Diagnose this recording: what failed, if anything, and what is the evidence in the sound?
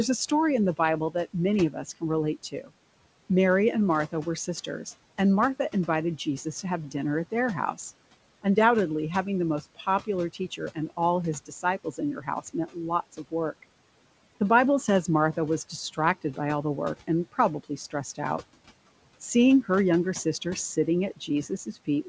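The call-processing noise suppressor misjudged speech as noise, producing speech cut by the noise suppressor in five stretches: 0.3–2.72 s, 4.12–7.77 s, 9.75–13.64 s after "having the most", 17.01–18.19 s after "all the work", and 20.24 s to the end after "her younger". Its gain dropped by up to about 18 dB, pulling soft consonants and word endings down into the room noise, which sits about 21 dB under the speech, so they sound swallowed. The worst stretch, near 10–14 s, loses around half a second in total. The band stops at 8 kHz, which fits a G.722 call path.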